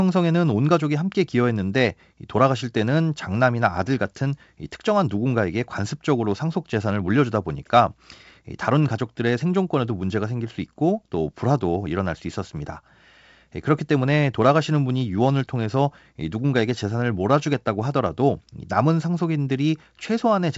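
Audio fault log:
No faults are heard in this speech clip. The G.722 wideband telephone coding at 64 kbit/s is working as intended, with nothing in the sound above 7.7 kHz.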